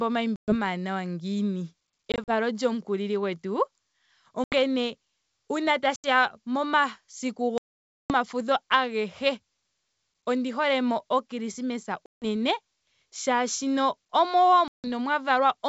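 Speech over a wideband G.722 call with packet loss on an ADPCM call: silent holes at 0.36, 2.12, 4.44, 5.96, 7.58 (about half a second), 12.06 and 14.68 s, each followed by speech returning slightly distorted while the decoder's predictor resyncs with the sender.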